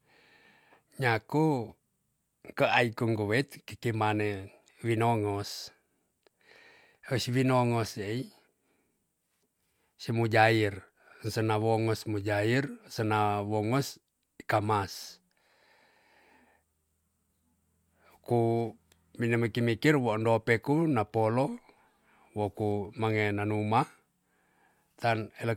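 No technical faults are audible anywhere in this speech.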